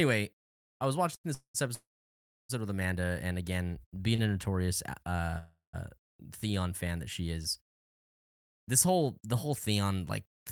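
At 1.15–1.26 s and 4.15–4.20 s, a short stall from a late packet holds the speech for 85 ms and 27 ms with a slight buzz or dip, then resumes. Call audio freezes at 1.34–1.56, 1.74–2.51 and 5.38–5.75 s, likely from delayed packets, fade into silence of 100, 640 and 140 ms before the speech continues.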